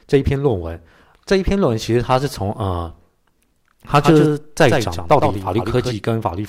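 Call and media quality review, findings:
Doubled audio track, 4.0 to 5.94 s: speech heard twice, second full-band copy about 100 ms behind and roughly 5 dB quieter, no decay or room colour, abrupt onset and cutoff. Likely cause: second capture path or edit holding an out-of-step copy. Waveform shows every envelope peak shadowed by a smaller twin; spectrogram shows each syllable's harmonics repeated at a fixed lag.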